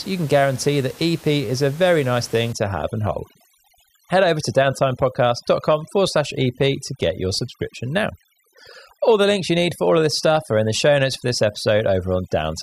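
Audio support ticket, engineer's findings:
Overdone noise removal from 2.53 s to end. Noise suppressor set too strong, cutting bands near its noise estimate. Background thins to twinkling, warbling specks; quieter speech parts pulled down with it. Room noise about 23 dB below speech.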